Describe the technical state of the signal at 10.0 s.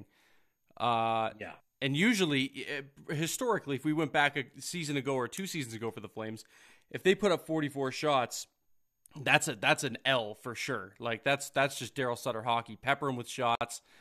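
At 10.0 s the speech signal is intact, with no dropout, distortion or other technical fault.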